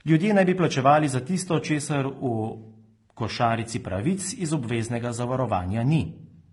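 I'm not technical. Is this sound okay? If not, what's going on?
No. The speech was likely saved in one compressed format and then converted into another, first HE-AAC and then AAC-LC, which is called transcoding between lossy codecs. Each format throws away some detail, and the second one wastes effort preserving the first one's flaws while adding its own. Throughout the clip, you hear both sets of flaws at once, and the top end stays as dull as the weaker of the two formats left it.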